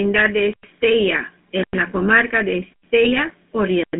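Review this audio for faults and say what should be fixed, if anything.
The whole clip carries GSM full-rate codec damage. The speech is confined to roughly 200 Hz to 3.5 kHz and has the plainly audible buzzy, gravelly texture of a pulse-excited vocal-tract model, consistent with the 13 kbps full-rate coder. Prevent it by routing the call over a wideband codec path.

GSM bit errors corrupt the speech from 3.05 to 3.19 s, producing squawks and gargling as damaged filter, pitch and gain parameters distort the decoded frames. The 140 ms span points to about seven 20 ms frames hit, with a bit error rate near 2 percent. Prevent it by improving radio link quality or enabling stronger channel coding and bad-frame concealment.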